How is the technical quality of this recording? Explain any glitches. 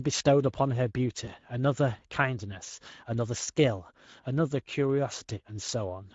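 The recording has two technical problems: coding damage across the whole speech clip and one brief dropout near the start.

Speex codec, throughout: The speech was squeezed through a CELP codec at a mid-range setting, consistent with roughly 16.8 kbps. At that rate the encoder has too few bits to model the excitation accurately, so the buzzy, breathy detail of the voice gets approximated. The result is plainly audible. The speech sounds rough, hoarse and somewhat noisy.

VoIP packet loss concealed by the speech codec, 1.25 to 1.32 s: A packet went missing, with the sound pointing to a single lost 20 ms frame. The decoder filled the gap by continuing from its last pitch and filter state while turning the level down. You hear a short smeared stretch that fades. Because each decoded frame depends on the previous one, the voice stays weak or distorted for tens of milliseconds after the real data resumes.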